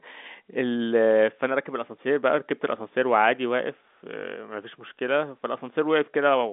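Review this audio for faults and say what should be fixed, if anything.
Nothing here needs fixing: the speech simply has the narrow sound of ordinary G.711 telephone coding, with nothing above about 3.8 kHz, and there's no fault to chase.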